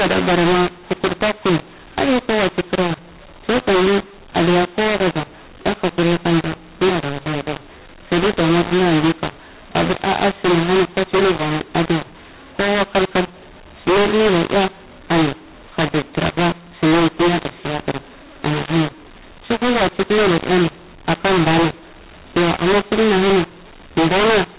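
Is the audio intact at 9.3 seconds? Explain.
No. At 9.3 seconds, as for the whole clip, the speech carries the mu-law and A-law mixed up fault. The telephone audio was encoded with the A-law curve of G.711 but decoded as mu-law, so every 8-bit code maps to the wrong level. Some samples grow too loud and others shrink, and the quietest ones are pushed well above silence. The speech sounds harsh and distorted, and noise fills the gaps between phrases.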